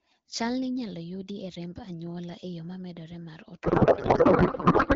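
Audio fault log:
3.63 to 4.95 s, codec payload misread: from 3.63 s to the end, the speech gives way to garbled noise and warble that barely tracks it. The frames are likely octet-aligned AMR-WB being unpacked as bandwidth-efficient, which shifts every field, so the decoder builds sound from misplaced bits.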